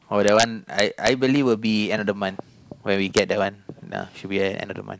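A gain or summing stage in this speech clip lets its integer values run past the maximum and wrap to the opposite sign instead of being limited, which is integer overflow. The loudest peaks, driven only about 2 dB over the limit, flip across the full range and come out as violent cracks far harsher than clipping, from 0.28 to 0.43 s and 0.79 to 1.08 s, with a sharp crack at 3.17 s, where the overdrive is about 1 dB.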